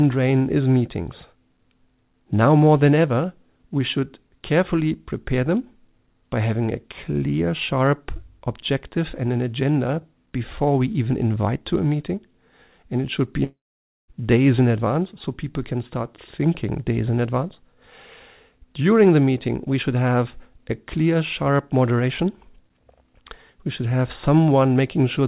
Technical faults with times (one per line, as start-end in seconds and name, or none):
13.44-14.10 long network dropout